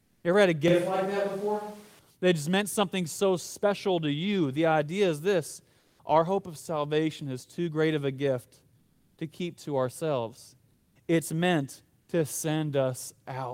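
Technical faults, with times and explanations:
0.00–0.23 s, 5.79–5.99 s, 8.79–9.17 s and 10.73–10.95 s, comfort noise in place of the background: in these pauses of 200 to 380 ms the real room tone is replaced by a steady, featureless hiss, about 2 to 5 dB quieter, sitting roughly 38 to 44 dB below the loudest speech. The likely cause is discontinuous transmission, consistent with Opus DTX, where the receiver synthesises shaped noise while the sender is silent. Landmarks: after "idea is this", before "our hope of salvation"; after "great of a gift", before "to keep to ourselves".
0.68–1.99 s, switch to a distant microphone: just after "ever had a", the speech abruptly turns roomy and hollow with thinner bass. There is no obvious change in level, but room noise rises to around 25 dB below the speech. The likely cause is that the close microphone dropped out and a farther pickup carried the signal for about 1.3 s, and the return to the close sound is equally sudden.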